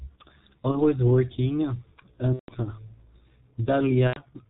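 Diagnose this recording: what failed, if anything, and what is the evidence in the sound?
Codec stage: speech was encoded with the G.723.1 codec at a rate that fits about 6.3 kbit/s, cutting everything above 4 kHz and leaving heavily muffled, hoarse audio with smeared consonants.

Network stage: VoIP packet loss concealed by the speech codec at 0.72–0.77 s, 2.33–2.53 s and 4.07–4.22 s; the decoder extrapolates its last frame, producing a buzzy tone or coloured noise that fades.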